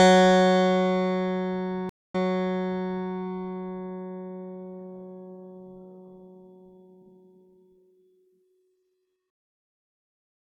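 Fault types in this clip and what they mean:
Stream reconnect: at 1.89 s the connection breaks and the music goes silent for 250 ms, then a fresh decoder resumes 940 ms earlier and repeats that passage. The waveform shows a flat gap and a brief fade-in, and the spectrogram shows a blank column before a repeated pattern.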